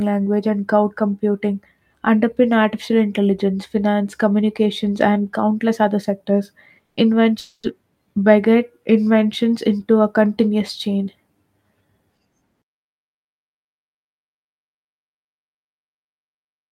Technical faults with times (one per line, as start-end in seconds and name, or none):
6.85-7.00 burst of packet loss
7.39-7.66 long network dropout